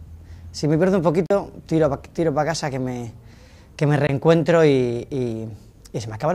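The audio cuts to silence twice, from 1.26 to 1.31 s (about 40 ms, which fits two lost packets) and from 4.07 to 4.09 s (about 20 ms), likely a Bluetooth dropout. The sound resumes further along, as if it had kept playing, leaving flat waveform gaps and sharp vertical full-band blanks on a spectrogram.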